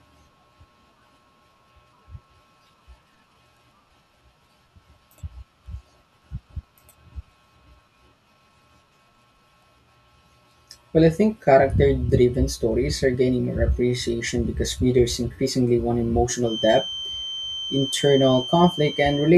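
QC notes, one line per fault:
16.41–19.38 s, feedback whistle: A thin, steady tone at 3.1 kHz sits behind the speech until the clip ends. It stays roughly 10 dB below the voice and swells and fades slowly in level. It never builds or runs away. The cause is likely a loudspeaker-to-microphone loop held right at the edge of feedback. One frequency then keeps recirculating through the system, so it rings on as a constant whistle.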